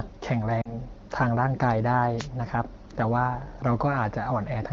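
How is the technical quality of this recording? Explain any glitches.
Two short glitches interrupt the speech, heard through the light band-limited character of AMR wideband (HD Voice) coding.

From 0.61 to 0.77 s the sound briefly drops to near silence. These are lost AMR speech frames: about 40 ms failed its checks, consistent with two 20 ms frames, so the decoder repeated the last good pitch and vocal-tract settings at lowered gain.

From 2.17 to 2.28 s a short swish of static cuts across the speech. This is a wireless microphone noise hit, where the FM radio signal faded and receiver noise briefly rose.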